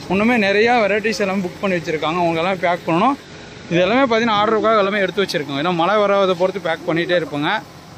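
From 3.18 s to 4.96 s the radio does a digital radio blend to analogue, cross-fading over 143 ms to the FM signal. Hiss rises to roughly 35 dB below the signal, while the level stays constant, which sets it apart from a simple fade or codec filtering.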